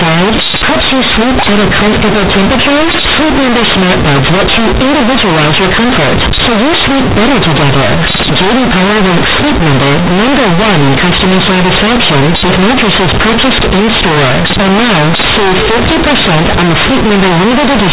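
Throughout this speech clip the sound is extremely loud and harshly buzzy, with quiet passages blown up to nearly the same level as loud ones and heavy noise filling the pauses. This is companded audio read as linear: A-law bytes are played back as plain linear 8-bit samples without expansion, so every sign change throws the waveform across about half its range. Beneath the distortion, the band stops below 4 kHz, which fits G.711 telephone coding.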